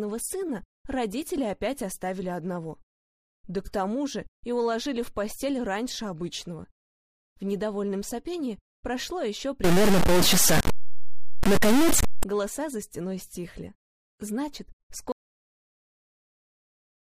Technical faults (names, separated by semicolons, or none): stuck bit; audio dropout to silence